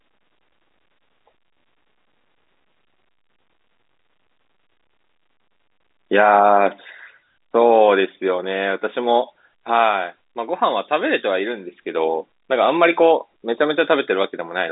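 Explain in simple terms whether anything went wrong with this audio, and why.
Nothing went wrong: the speech carries the narrow, muffled-top sound of an ordinary landline call, which is simply G.711 telephone coding working as designed.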